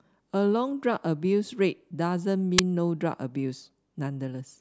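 At 2.58 s the speech is interrupted by an uninitialised buffer: a block was sent to playback before any audio had been written into it, so whatever stale memory it held came out as samples. It sounds like a sudden, loud crack lasting only 8 ms, which fits a 128-sample buffer. On the waveform it is a narrow slab of large, erratic samples with hard edges. A spectrogram shows a thin vertical stripe of broadband energy.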